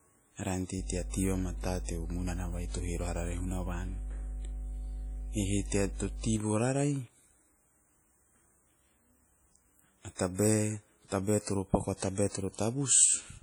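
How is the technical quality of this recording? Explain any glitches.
The technical quality is poor. The speech carries heavy codec damage from start to finish, and a loud mains hum covers the first half.

Heavy codec damage is audible for the whole clip. It is likely WMA compression, consistent with an early WMA encoder at around 32 kbps. A transform codec like this uses long blocks, so its quantisation noise is smeared over tens of milliseconds around each syllable. At this rate, weaker spectral lines are discarded. The speech sounds ringing and washy, with a hiss that swells and fades along with the voice. On a spectrogram, the upper bands look patchy, with holes and blocky time-frequency smearing around onsets.

Mains hum runs from 0.76 s to 6.39 s. Power-line interference, from a ground loop or a nearby transformer, was coupled into the signal. The result is a steady 50 Hz tone only a few decibels below the speech, strong enough to compete with it. 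On a spectrogram, it shows as a solid horizontal line at 50 Hz for that stretch. On the waveform, a continuous low-frequency swell rides under the speech for that stretch.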